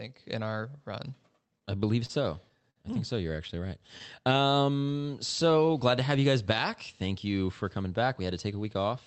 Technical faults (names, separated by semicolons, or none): repeated stalls (stutter); jitter buffer slow-down; jitter buffer speed-up